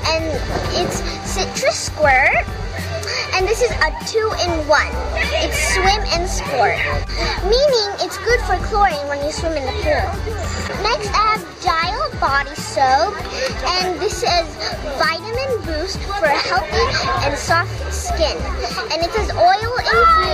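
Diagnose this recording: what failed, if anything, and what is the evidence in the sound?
Nothing failed; no audible defect appears anywhere in the recording.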